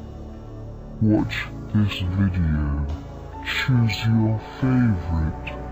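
Stereo read as mono runs from start to finish. The left and right samples, which alternate in the stream, were taken as one continuous channel, so every pair of stereo samples became two consecutive mono samples. Played back at the intended rate, that stretches everything to twice its length. The sound moves at 0.5× speed and sits a full octave low, 12 semitones down, giving it a slow, sluggish, dragged-out character throughout.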